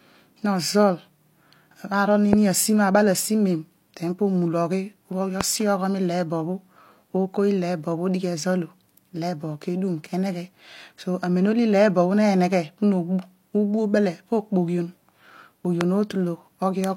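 At 2.33 to 2.35 s, 5.41 to 5.43 s and 15.81 to 15.83 s the speech is hit by a loud pop, each a single sharp thump lasting about 20 ms and standing roughly 20 dB above the speech. A sudden voltage step, likely from a plug, switch, static discharge or driver glitch, is added to the signal. Unlike a dropout or an edit click, the speech carries on unbroken beneath each pop.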